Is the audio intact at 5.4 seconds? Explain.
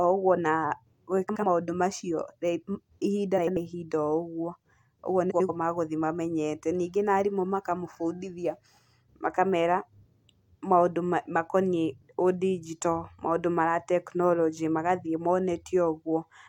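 No. Between 5.3 and 5.5 s there are frames out of order: two neighbouring runs of about 93 ms each, which fits four frames apiece, were decoded in swapped order. That stretch of speech plays with its halves exchanged, giving a garbled flutter, though no time is lost.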